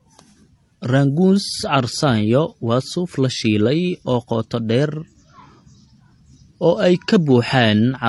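Throughout the speech, a flat spectrogram ceiling at 11.4 kHz and layered smeary, swirling artefacts point to likely transcoding between lossy codecs, fitting low-bitrate MP3 re-encoded as HE-AAC.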